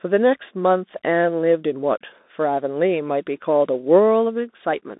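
Throughout the speech, Bluetooth CVSD headset codec damage is plainly audible. Each sample is one up-or-down bit, which fits a 64 kbps link. The band runs 200 Hz to 3.7 kHz, with nothing above 3.8 kHz. S sounds turn scratchy over granular hiss.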